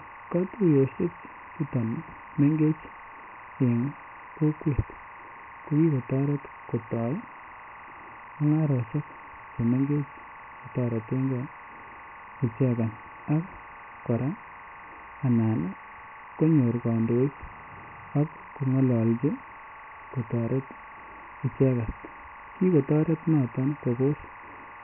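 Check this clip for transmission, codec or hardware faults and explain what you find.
Two faults run through the whole clip: timecode bleed and heavy Dialogic VOX ADPCM coding.

Timecode bleed, from start to end: a steady chirping warble sits behind the speech, about 20 dB below it, flipping between pitches around 1 and 2 kHz. Linear timecode is a square wave whose frequency toggles with the bit pattern. At 25 frames per second it streams continuously, so when it leaks in from an adjacent track or cable it forms an unbroken, rhythmic twitter under everything.

Dialogic VOX ADPCM, throughout: the speech is dull and boxed-in, with nothing above 2.9 kHz, and a gritty hiss rides on every syllable. The narrow band and the heavy grain fit a 24 kbps VOX file, which stores 4-bit ADPCM at 6,000 samples per second. That rate caps the bandwidth just below 3 kHz, and the coarse 4-bit steps leave quantisation noise that tracks the speech rather than sitting as a constant floor.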